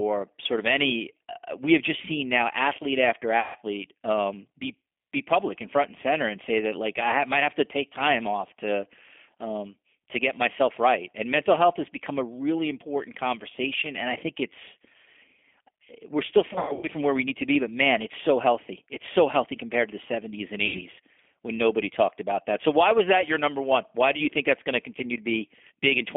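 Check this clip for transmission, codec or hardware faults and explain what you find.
The clip has two faults: G.729 codec damage throughout the speech, and three short dropouts covered by the codec's packet loss concealment.

The G.729 codec is heard from start to end. This 8 kbit/s coder rebuilds speech from a vocal tract filter, a pitch model and a few pulses per frame. The line band here runs from 200 Hz to 3.5 kHz. The damage is plainly audible. Speech sounds thin, slightly rough and synthetic, with no high end.

VoIP packet loss concealed by the speech codec occurs three times. From 3.40 to 3.57 s, after "seen now athlete after" and before "um be be public", about 150 ms is missing. From 16.53 to 16.88 s, after "we're still" and before "from where we need", about 210 ms is lost in pieces scattered over 300 ms. The longest single gap is 90 ms. From 20.66 to 20.84 s, just before "when nobody talked about", about 90 ms drops out. 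These gaps fit a handful of lost 30 ms packets each. The decoder fills each gap by repeating its last pitch and filter at falling gain. The sound smears into a buzzy tone or coloured noise that fades. It stays weak for a moment after the stream resumes.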